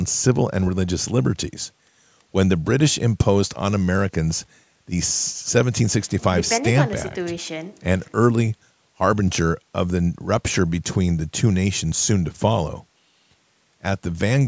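Speech through a call's microphone processing, with the usual high-pass trimming the lowest bass and nothing above 8 kHz, and no technical faults to report.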